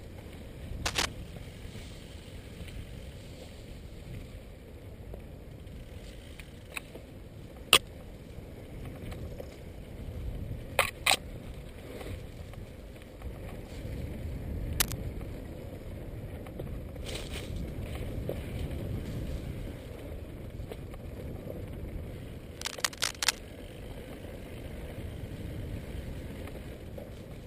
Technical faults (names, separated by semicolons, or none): cable scratch noise